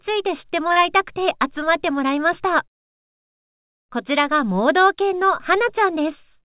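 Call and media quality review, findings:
Brief smear at 0.72–0.79 s, the sound stretched over a hole. Short concealed packet loss: about 30 ms never reached the decoder in time; jitter buffer/PLC synthesised roughly 33 ms from the preceding signal, then crossfaded back. Band-limited call path, nothing above 4 kHz, consistent with G.711 mu-law.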